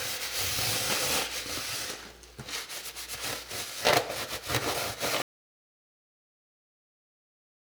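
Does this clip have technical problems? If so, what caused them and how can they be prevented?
Yes. An audio dropout to silence begins at 5.22 s and lasts to the end. The sound cuts off abruptly into silence, likely from lost input or a stray mute, unlike a fade or quiet passage, where room tone would remain. Securing connections and monitoring input levels prevents it.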